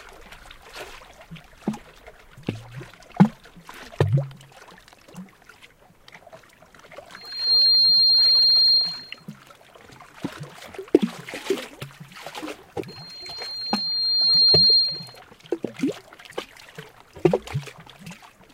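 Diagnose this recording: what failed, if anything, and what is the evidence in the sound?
Loudspeaker feedback squeal, in the analogue microphone-to-loudspeaker loop: a lone 4.2 kHz tone swells at 7.16–9.25 s and 12.88–15.20 s, reaching roughly 15 dB above the sound. Loop gain exceeds one there. Unlike a steady whistle, it grows, within half a second, then over about 1.5 s.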